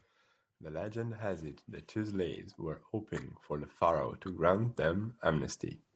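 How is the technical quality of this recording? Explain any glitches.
The recording is band-limited to about 8 kHz, consistent with a call codec at a low bitrate, and it has two level swells from automatic gain rising. From 0.61 to 2.9 s and again from 3.49 to 5.65 s, the gain control judges the input too quiet and ramps up slowly, by about 8 dB and then about 6 dB. Speech and background noise swell together.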